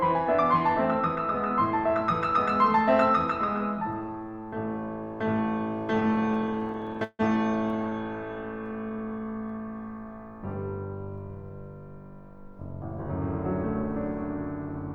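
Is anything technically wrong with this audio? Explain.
Yes. Repeated stalls (stutter) occur at 5.95–7.21 s and 7.69–7.93 s: late packets kept emptying the jitter buffer, so the music was stretched with held, fading sound, up to 154 ms per gap, making it drag and stutter. A jitter buffer slow-down follows at 8.72–9.25 s, where repeated short cycles add 55 ms, so the music plays at 91% speed at unchanged pitch.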